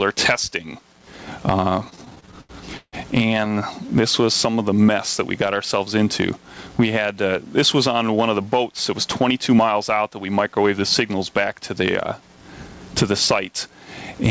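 From 1.80 to 2.96 s, packets kept arriving late, so the jitter buffer repeatedly ran dry, giving repeated stalls (stutter). The receiver stretched the last sound across 13 gaps, 366 ms in total and up to 156 ms each, about a third of that stretch, so the audio drags and stutters with nothing lost.

Between 3.85 and 4.85 s, the buffer was rebuilding its reserve, so a jitter buffer slow-down repeated single pitch periods and added 78 ms. The sound plays at 93% speed with unchanged pitch, drawn out.

At 7.12 to 7.46 s, the buffer held more audio than its target, so a jitter buffer speed-up cut short pitch-period pieces, removing about 40 ms. The sound runs at 109% speed at the same pitch and feels briefly hurried. Throughout, the call path's codec leaves nothing above 8 kHz.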